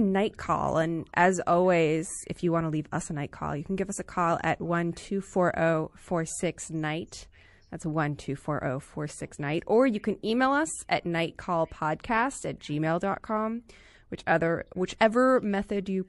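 MP3 compression runs through the whole of this speech clip, and its damage is plainly audible. It sounds watery and swirly, with smeared attacks. The likely cause is an MP3 encode at a low bitrate, consistent with about 48 kbps. With too few bits, the encoder drops weaker frequency lines, and they flicker in and out from frame to frame. Pre-echo appears from 14.98 to 15.01 s, a hiss lasting about 24 ms just before a sharp onset, with noise about 16 dB above the quiet moment it fills. The encoder stayed with long blocks of about 48 ms rather than switching to short ones, so quantisation noise scaled for the loud attack spread back across the quieter start of the block and softened the onset.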